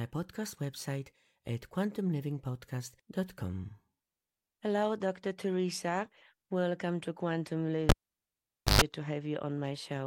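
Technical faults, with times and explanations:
7.89 to 8.82 s, cable pulled and plugged in: a pop at 7.89 s marks the live lead coming out, and the audio falls to near silence for about 0.87 s. As the plug goes back, only the tip makes contact at first, so the unshielded input picks up 50 Hz mains buzz for roughly 0.12 s. A second pop follows when the connector seats fully and the sound returns at 8.82 s.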